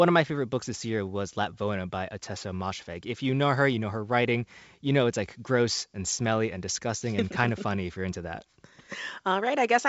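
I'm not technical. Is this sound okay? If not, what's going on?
Yes, this speech sounds fine: it has the slightly trimmed top end of a good wideband phone call, with nothing above about 7.7 kHz, and nothing in it sounds broken.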